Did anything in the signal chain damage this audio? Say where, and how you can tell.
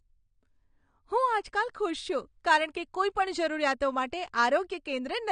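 Yes, and it sits at the codec stage, running the whole way through the clip. The speech has nothing above about 9.7 kHz, so the top end is shaved off flat, and there's a dull, smeared quality with a warbly, fizzy edge on the sibilants. That pattern is the signature of AAC compression, likely AAC-LC starved of bits, with a sound that fits something around 32 kbps. The encoder drops the cut-off and quantises coarsely to save data.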